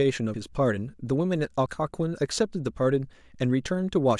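At 0.34 s the speech skips forward, losing around 70 ms, and at 1.66 s a smaller jump drops roughly 20 ms. Both sound like a likely dropped buffer (overrun): samples were overwritten before being read, so the surrounding audio is spliced straight together. Unlike a dropout, there is no silent gap. The sound simply lurches ahead.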